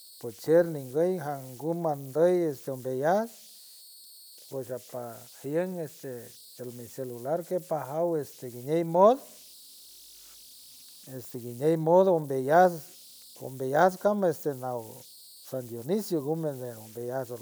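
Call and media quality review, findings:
Faint whistle around 4 kHz through the whole speech clip, most exposed in pauses, with grainy noise under quiet passages, about 25 dB below signal. Converter idle tones: undithered delta-sigma ADC/DAC locking into repeating bit patterns at low input levels.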